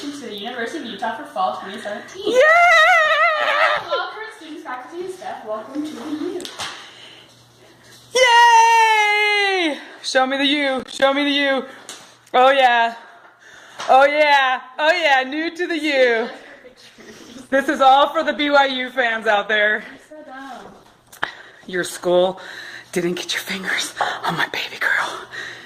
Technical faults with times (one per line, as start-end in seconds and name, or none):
10.79-11.02 processor overload crackle
16.37-22.37 adaptive stream at a lower bitrate